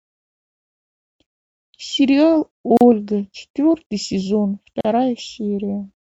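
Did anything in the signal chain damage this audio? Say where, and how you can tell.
Yes. The speech drops out twice, from 2.77 to 2.81 s and again from 4.81 to 4.85 s, each a hole of about 38 ms with its edges smeared by the codec, after which the sound resumes exactly where it left off. That is a gap at a join of encoded pieces, a codec-stage fault: segments roughly 2.0 s long were encoded separately and concatenated without trimming, so each encoder's start-up delay and final-frame padding remain as silence at every join.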